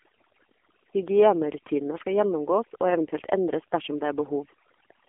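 Right from the start there's overdone noise removal: the background drops away and breaks up into little twinkling specks, and quieter parts of the speech drop out. The whole clip also runs through an AMR narrowband mobile codec, band-limited to roughly 250 Hz to 3.4 kHz, with nothing above 3.7 kHz. The heavy buzzy, synthetic quality points to a low mode around 6.7 kbps.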